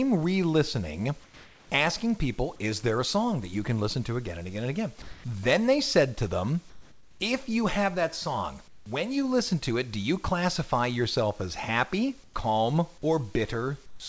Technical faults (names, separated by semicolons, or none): comfort noise in place of the background